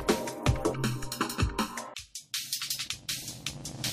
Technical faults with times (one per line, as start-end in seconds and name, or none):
0.74-1.77 channel delay (comb filtering)